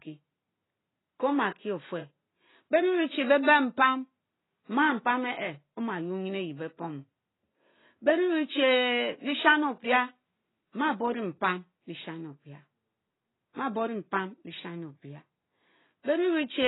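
From start to finish the speech carries heavy AAC compression damage, most likely from an AAC-LC encode at a very low bitrate, which fits something around 16 kbps. Nothing survives above about 3.9 kHz, so the top end is simply chopped off and everything sounds dull and boxed-in. With so few bits to share out, the encoder starves the remaining bands too, leaving a smeared, watery texture with a fizzy warble on sibilants and held vowels.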